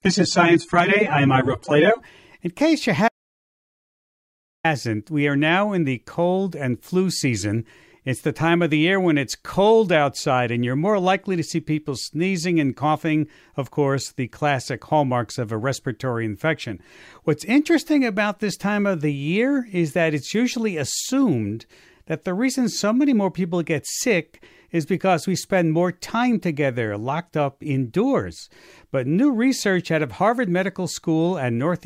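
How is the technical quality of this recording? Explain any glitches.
The recording has two clear glitches: a low-quality opening and a total cut-out a few seconds in.

From 0.0 to 2.0 s, this is an adaptive stream starting at a low bitrate. The player began on a lean encoding, consistent with roughly 24 kbit/s AAC, until it had measured the connection, so the speech lacks treble and carries stronger codec artefacts. At 2.0 s it steps up, plausibly to about 96 kbit/s, and the sound abruptly clears with no gap.

From 3.08 to 4.64 s there is an audio dropout to silence. The input was likely lost, perhaps through a disconnect or a mute, while recording continued writing silence. The speech stops mid-flow for about 1.56 s of dead silence, with no room tone, and whatever was said then is gone.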